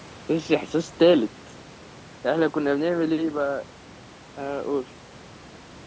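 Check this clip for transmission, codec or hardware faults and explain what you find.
No transmission, codec or hardware faults turn up anywhere in the clip. The speech has the band-limited sound of call microphone processing, with nothing above 8 kHz, and a low room noise sits about 24 dB below it.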